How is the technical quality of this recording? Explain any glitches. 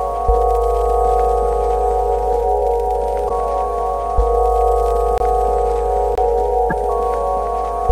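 The music has four audible glitches, two from corrupted compressed data and two short dropouts.

Around 3.25 to 3.31 s and again at 6.68 to 6.73 s there's damaged data in the compressed stream. The decoder chokes on bad frames and resyncs, giving a brief glitch.

At 5.18 to 5.20 s and 6.15 to 6.18 s you get a block of digital silence, a 23 ms hole. That fits a 1024-sample buffer that wasn't filled in time.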